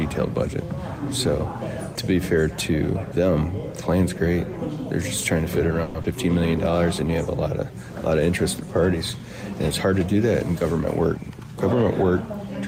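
At 5.83 s the sound stalls for about 0.13 s. The last sound is drawn out as a short fading buzz rather than dropping to silence, and it then carries on exactly where it stopped. This is a call audio freeze, most likely caused by packets held up in transit until the jitter buffer ran dry. Unlike a loss, nothing is skipped: about 110 ms of filler is inserted and the playback delay grows by that amount.

Moments later, at 6.02 to 6.06 s, comes a short concealed packet loss. A span of the stream never arrived in time, so the receiver extended the preceding sound for 20 ms and blended back in. Roughly 60 ms of real audio is gone, which is the key difference from the freeze just before it. The result is a brief smear or wobble, with a small jump forward that trims a few hundredths of a second off the delay.

From 11.23 to 12.38 s there is a jitter buffer speed-up. The buffer was holding more audio than its target, so the receiver repeatedly cut out tiny pitch-period-sized slices to catch up. 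Playback runs at about 104% of normal pace while the pitch stays unchanged, which separates it from a simple resampling error. Across the stretch, in total about a twentieth of a second is removed.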